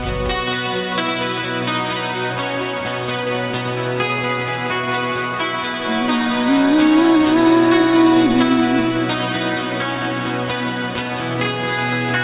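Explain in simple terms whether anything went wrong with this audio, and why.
Nothing went wrong here; there are no glitches, dropouts or other technical problems to point to anywhere in this recording.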